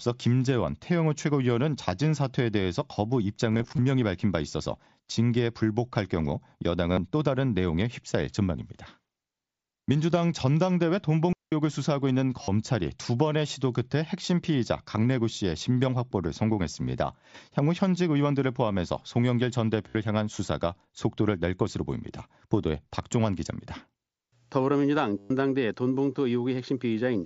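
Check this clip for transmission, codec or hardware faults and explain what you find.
Two kinds of fault are present in the speech, heard through the light graininess of the wideband mSBC headset codec.

Concealed Bluetooth headset packet loss occurs at 3.52 to 3.82 s (about 143 ms lost, scattered, longest run 22.5 ms), 6.93 s (45 ms), 12.43 s (45 ms), 19.89 s (60 ms) and 25.18 s (120 ms). The receiver repeats recent waveform, which nearly hides single losses and turns runs into buzzy held tones with a warble on recovery.

A digital wireless dropout at 11.33 to 11.52 s mutes the link for about 191 ms, leaving a clean near-silent hole with no surrounding noise burst.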